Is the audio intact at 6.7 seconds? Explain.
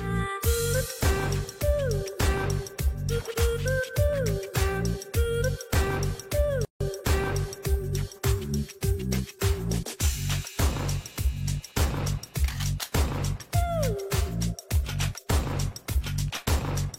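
No. From 6.65 to 6.81 s the sound drops into a gap of about 156 ms with smeared edges, then resumes where it stopped. This is a gap at a join of encoded pieces: separately encoded segments were joined untrimmed, leaving encoder start delay and final-frame padding in place.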